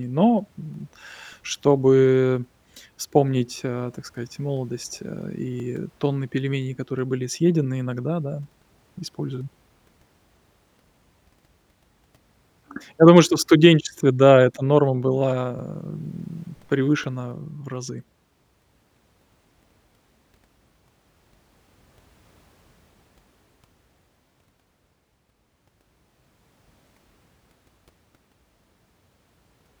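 At 5.60 s, between "так сказать молодость э" and "тонны пельменей которые были", the speech jumps forward by a few milliseconds, with the two sides butted together and no gap. The same skip recurs at 15.59 s, just before "м превышена в разы", and at 25.58 s. The exact 10 s spacing points to audio missing between chunks, most likely from a recorder dropping a sliver of signal each time it closes one 10 s block and opens the next.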